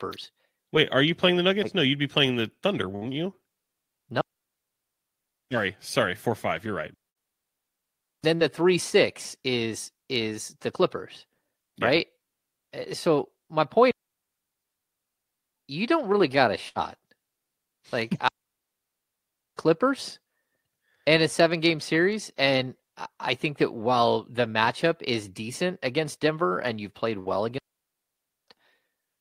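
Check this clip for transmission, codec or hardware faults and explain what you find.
The speech clip has two transmission faults: short bursts of packet loss and longer digital wireless dropouts.

Burst of packet loss occurs at 2.95, 7.09, 8.35, 16.68 (after "don't really got a") and 27.19 s (after "and you've played"). The receiver fills each gap of about 55 to 70 ms by continuing and fading the last sound, then resumes with about 60 ms of audio skipped. The filled, fading sound and the jump distinguish it from a silent dropout.

Digital wireless dropout mutes 4.21 to 5.51, 6.94 to 8.24, 13.91 to 15.21 (between "so my" and "you don't really got"), 18.28 to 19.58 and 27.58 to 28.48 s. The link loses too much data and the receiver mutes with a very short fade. Each mute is a clean hole of near silence with no burst of noise at either edge.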